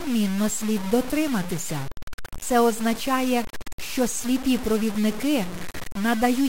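A speech recording with grainy, gritty distortion running through the whole thing. The grit rides along with the voice, only about 15 dB below it, and quiet tails sputter out. That's likely low bit depth without dither, consistent with truncation to around 5 bits.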